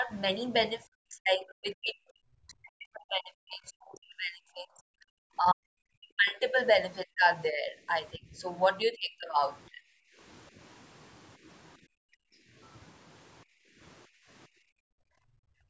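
Speech suppressed in double talk runs through the first ten seconds of this speech recording, at 0.0–0.12 s, 0.87–6.55 s, 7.05–8.43 s, 8.82–9.35 s and 9.72–9.81 s. The voice dips by roughly 10 dB at the start, sinks by as much as about 40 dB across roughly five seconds of the long middle stretch, and drops by roughly 25 to 35 dB in the later bursts, thinning and breaking up in pieces. The likely cause is an echo canceller that, with both ends talking, could not tell the near talker from loudspeaker echo and pulled everything down. From 10.09 s the background gated by the echo canceller takes over, with the room sound dropping by about 23 dB at 10.09–10.19 s, about 37 dB at 11.78–12.55 s and about 33 dB from 13.44 s to the end. Each time the canceller clamps the microphone while the far side plays; after the first two drops the ambience returns when it releases, while the last runs on to the end of the clip. 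The call microphone path itself is band-limited, with nothing above 8 kHz.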